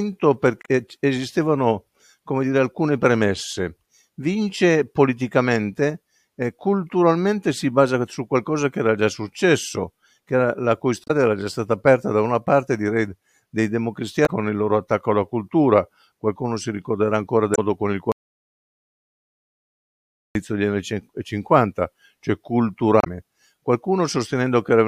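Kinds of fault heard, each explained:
Damaged data in a compressed stream: Corrupt bytes make the decoder misread frames and resync, giving short glitches in the sound. This speech clip has five, at 0.62, 11.04, 14.23, 17.52 and 23.0 s. The first comes just before "esistevano come dire alcune", another after "successo era la cui".
Audio dropout to silence: The input vanishes while recording continues, so silence with no room tone replaces the sound. Here it cuts out after "con il" at 18.12 s and returns at 20.35 s. About 2.2 s is lost, likely from a dropped input link.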